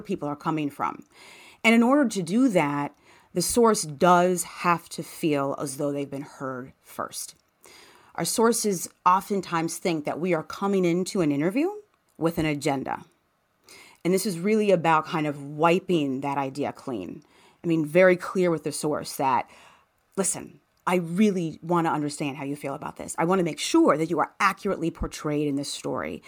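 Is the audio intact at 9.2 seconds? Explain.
Yes, the speech at 9.2 seconds plays through cleanly, with no dropout, click, distortion or other fault at that moment.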